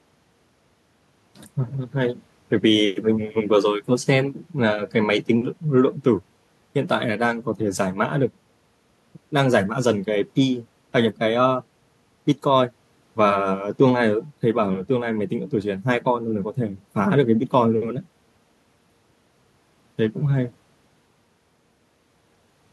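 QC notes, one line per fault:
No faults detected in this speech recording.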